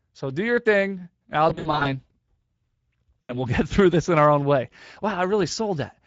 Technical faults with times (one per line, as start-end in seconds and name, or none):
0.00-6.06 Speex codec
1.49-1.91 VoIP packet loss concealed by the speech codec
3.24-3.38 VoIP packet loss concealed by the speech codec